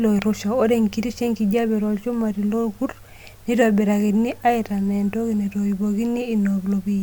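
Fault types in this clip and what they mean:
No audible faults in this recording.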